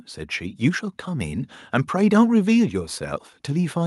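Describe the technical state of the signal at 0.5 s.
At 0.5 s the speech and the background are swelling together, growing about 4 dB louder over the span from 0.37 to 1.58 s. This is automatic gain rising: the gain control judged the input too quiet and slowly turned its amplification up.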